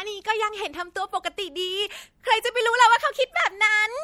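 Throughout, the speech has passed through what is likely MP3 compression, and the sound points to a low bitrate near 64 kbps. Short of bits, the encoder trims the treble and switches weak detail on and off frame by frame, giving a plainly audible watery, swirly texture.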